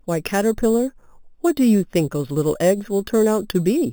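Imaging from sample-and-hold upsampling runs throughout: speech repeated unsmoothed from 8 to 44.1 kHz mirrors into 4 to 8 kHz, about 20 dB down, a metallic fizz that tracks loudness, unlike steady hiss.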